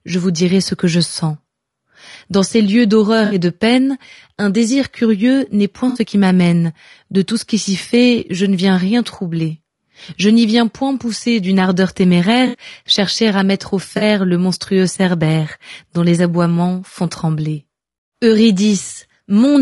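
Throughout the speech, the sound is rough and grainy, with noise filling the gaps between pitch harmonics and a thin, synthetic-sounding top band. This is likely low-delay AAC compression (AAC-ELD), whose short frames resolve harmonics poorly, and the plainly audible damage fits a bitrate around 32 kbps.

From 3.25 to 3.35 s, between "ces lieux" and "de peine un désir", a smeared, noisy patch replaces about 60 ms of audio. The same happens from 5.89 to 5.99 s, after "désir curieux n'est point" and before "qui m'amène", and again from 12.47 to 12.57 s. A shorter 40 ms patch follows from 13.97 to 14.03 s, between "chercher à mettre au" and "le monstrueux cerbère dont". Each is AAC frame loss with concealment: when frames went missing, the decoder filled the gap from the last good spectrum, producing these brief blurred stretches rather than silence.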